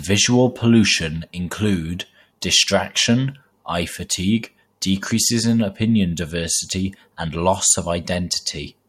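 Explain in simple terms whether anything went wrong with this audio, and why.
At 2.41 s a sharp attack in the speech is preceded by a brief hiss, about 11 ms long, so the onset sounds softened and smeared rather than crisp. This is pre-echo. The compression chops sound into blocks and spreads its rounding noise evenly across each one. Here the blocks appear to be about 26 ms long, with no shorter blocks used around the attack, so the noise meant to sit under the loud moment also fills the quiet instant just before it.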